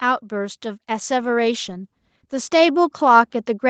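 From 0.05 s to the end, the speech and its background swell together, growing steadily louder across the whole clip. This is automatic gain rising: the gain control judged the input too quiet and kept raising its gain gradually rather than settling at a level.

From 1.19 s to 2.77 s the speech turns rougher and more watery. This is a call bitrate drop: the Opus encoder fell from 32 kbps to 18 kbps, holding its lowest rate for about 1.5 s and coding each moment more coarsely until it recovered.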